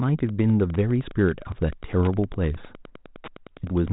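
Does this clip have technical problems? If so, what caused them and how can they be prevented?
Yes. Wi-Fi interference runs through the whole clip as a steady ticking of about ten clicks a second, a click every 102.4 ms, sitting well below the speech. A nearby Wi-Fi radio sends its beacon on that period, and some part of the audio circuit rectifies the radio bursts into audible pulses. The telephone-band G.726 coding carries this ticking along with the speech. To prevent it, keep Wi-Fi radios and antennas away from the microphone, cables and preamp, and use shielded, properly grounded cabling.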